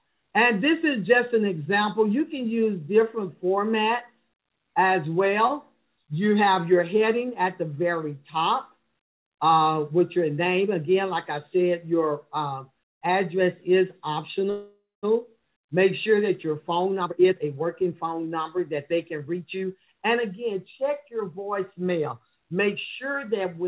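Packets were most likely held up in transit at 14.5 s, emptying the jitter buffer and causing a call audio freeze. The receiver stretches the last sound into a fading buzz that drops to silence for about the final 210 ms before the audio resumes at 15.05 s. About 0.53 s of gap has been inserted, but nothing is skipped; playback picks up exactly where it stopped, only later.

Once the delayed audio arrives, the jitter buffer holds more than it wants and performs a jitter buffer speed-up from 16.72 s to 19.75 s, repeatedly cutting out tiny pitch-period slices to shed the added delay. Roughly half a second is trimmed, so this stretch plays at about 118% speed with unchanged pitch and sounds noticeably rushed. Throughout, nothing is heard above 4 kHz, consistent with a G.711 call path.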